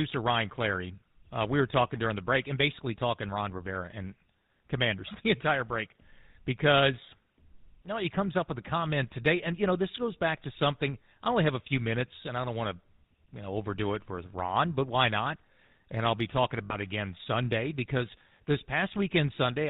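Across the whole recording the speech carries a buzzy, gravelly roughness, with a dull, band-limited top that stops around 4 kHz. This is the GSM full-rate codec, and its damage is plainly audible. The codec rebuilds the voice from a vocal-tract model fed with a sparse pulse excitation that keeps only one sample in three. That coarse excitation gives the grainy buzz, and the character points to the 13 kbps full-rate mode.

From 16.64 to 16.76 s, just after "I'll be talking", the sound briefly locks into a rough, metallic ring. These are lost GSM frames. The decoder had no valid data for that stretch, so it reused the parameters from the last good frame. The short length fits roughly three missing frames, about 60 ms of audio.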